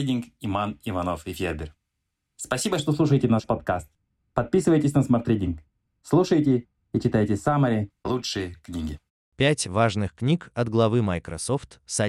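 A speech recording, and from about 2.8 s to 7.9 s it goes dull and muffled: that's de-emphasis applied wrongly. A treble roll-off meant to undo pre-emphasis has hit audio that never had any, or was applied a second time, sloping smoothly down to about 11 dB lower at 10 kHz than at 1 kHz.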